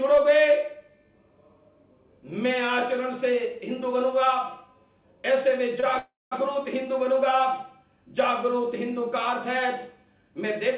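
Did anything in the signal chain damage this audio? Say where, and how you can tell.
Yes. A short stall from a late packet at 5.80 s: the jitter buffer ran dry, so the receiver held the last sound for about 24 ms, then resumed with nothing lost.

A call audio freeze from 5.98 to 6.33 s, likely from network delay: the receiver stretched the last sound into a fading buzz, then about 200 ms of silence, adding 330 ms before resuming.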